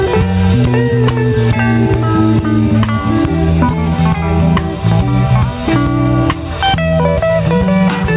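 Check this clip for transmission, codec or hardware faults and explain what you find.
One fault is present: gain pumping, running through the whole clip. The gain swings up and down by roughly 10 dB. The likely cause is input gain set far too high, with a fast limiter or compressor clamping down on each peak and releasing in the pauses. Loud and quiet passages end up squeezed together, giving a flattened, crowded sound. The call path itself is narrowband, with nothing above 4 kHz, which fits a G.711 mu-law link at 64 kbps.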